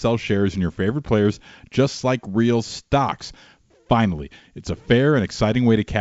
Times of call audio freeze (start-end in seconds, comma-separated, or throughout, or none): none